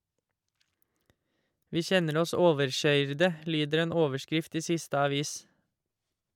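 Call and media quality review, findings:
No faults found.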